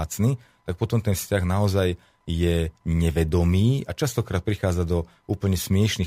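Nothing in this speech recording stands out as a technical fault at any point, so there's nothing here to flag.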